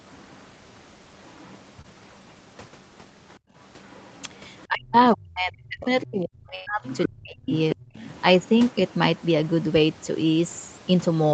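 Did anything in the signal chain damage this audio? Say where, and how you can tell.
Yes, several call-processing and network stages left audible damage in this speech.

Other side's voice leaking through, call processing (echo path): a second, fainter voice sits under the talker from 0.12 to 1.55 s, 3.32 to 4.66 s and 5.81 to 9.19 s. It is about 35 dB and about 30 dB below the main speech in the first two spans, rising to about 15 dB below in the last. That is likely residual echo the canceller failed to subtract from the microphone. On a spectrogram it shows as a separate set of harmonic stripes and formants, uncorrelated with the main talker's.

Short concealed packet loss, network: at 1.81 to 1.86 s there is a brief smear where about 20 ms of audio never arrived. The decoder extrapolated roughly 26 ms from the preceding sound and crossfaded back into the real signal. On a spectrogram the preceding sound runs on, slightly blurred, with no new onset. 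In the waveform it continues before it splices into fresh material.

Background gated by the echo canceller, call processing: from 3.40 to 3.55 s the room tone drops by about 30 dB for roughly 150 ms while the far side is playing, then returns. The canceller's suppressor clamped the microphone path. The waveform's noise floor collapses to near zero for that stretch. On a spectrogram a vertical band of emptiness cuts through the background noise across all frequencies.

Speech suppressed in double talk, call processing: between 4.67 and 7.85 s, while the far side talks over the near talker, the main voice dips, thins and breaks up. The affected stretches add up to roughly 2 s, with the deepest cuts near 40 dB. The likely cause is a canceller that could not tell its own talker from the loudspeaker echo and attenuated both. On a spectrogram the upper harmonics fade out and the voice shows patchy gaps. 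In the waveform the envelope is chopped.

Burst of packet loss, network: at 6.55 to 6.68 s about 100 ms of audio is missing. The receiver filled roughly 107 ms by extending the last sound and fading it, so a held buzz or decaying hiss stands in for the lost stretch. No silence is inserted. On a spectrogram the last sound holds and dims gradually, then jumps abruptly to unrelated content. The waveform shows a held, shrinking stretch before the discontinuity.

The Opus codec's cut-off at 8 kHz is also visible as an empty band above that line on a spectrogram. That cut-off is normal behaviour for the codec, not damage.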